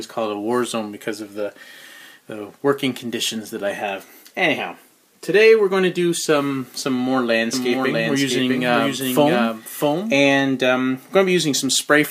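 A doubled audio track runs from 7.53 to 10.17 s: a dry copy trails roughly 0.7 s behind, about 5 dB quieter, likely via a slower path.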